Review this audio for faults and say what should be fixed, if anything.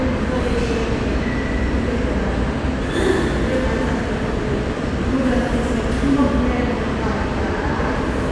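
No faults turned up in this audio, so nothing needs to be fixed.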